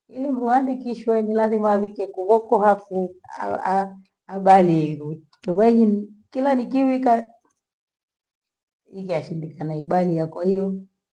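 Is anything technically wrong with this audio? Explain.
Yes, the speech has two kinds of fault, both from lost call packets.

Short concealed packet loss at 1.83, 5.51, 7.23 and 10.51 s: each time about 40 ms of audio failed to arrive, and the receiver bridged the gap by extending the preceding sound before blending back. Each is heard as a brief smear or wobble, and a short consonant can disappear.

Burst of packet loss from 9.79 to 9.90 s: roughly 80 ms went missing in a row. The decoder stretched the last sound and faded it out, producing a held buzz or fading hiss, and the speech resumes with that stretch gone.

The audio is band-limited to about 12 kHz, consistent with Opus call coding.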